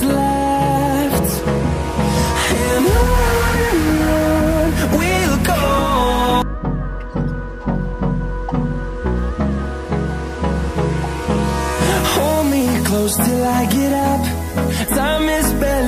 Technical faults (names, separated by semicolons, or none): none